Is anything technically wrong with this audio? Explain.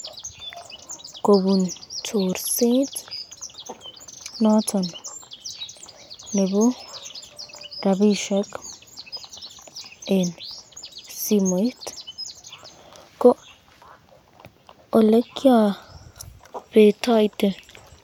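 No, nothing is technically wrong with this audio.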